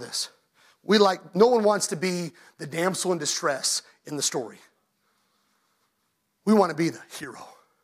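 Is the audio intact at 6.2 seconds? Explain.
Yes, the audio is intact at 6.2 seconds, with the speech running through that moment without any audible fault.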